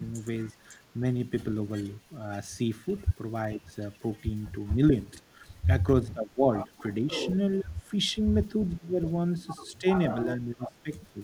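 Echo leak from 0.13 to 9.79 s: a faint copy of the speech trails 438 ms behind, around 30 dB down. The likely cause is an echo canceller at the loudspeaker end letting its microphone pickup return.

Speech suppressed in double talk at 3.56 to 3.71 s, dipping about 15 dB. From 4.76 to 11.2 s it recurs in pieces totalling roughly a second and a half, up to about 20 dB deep. The likely cause is the canceller turning down this talker along with the echo while both sides spoke.

The echo leak returns from 10.73 to 11.13 s, weaker at around 40 dB down, again 438 ms late.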